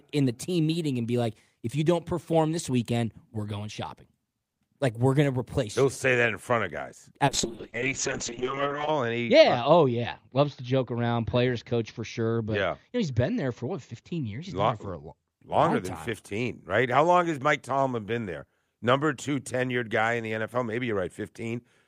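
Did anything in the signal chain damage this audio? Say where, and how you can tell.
Yes. The damage is in the call's codec path, a call bitrate drop from 7.32 s to 15.37 s, starting right after "in front of guys". The speech turns rough and watery, and the top end collapses from 20 kHz down to 8 kHz, so it sounds muffled. The worst stretch lasts about 1.6 s. That points to the encoder being pushed from around 48 kbps to roughly 6 kbps after the bandwidth estimate fell. It then codes coarsely and discards the highs until the rate recovers.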